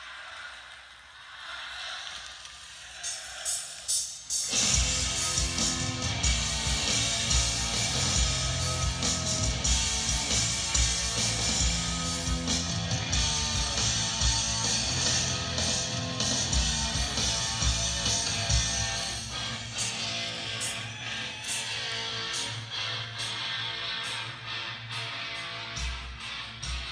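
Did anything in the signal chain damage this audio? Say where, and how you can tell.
No, nothing in the chain audibly damaged this audio, and the signal holds steady and continuous at every stage from capture through playback.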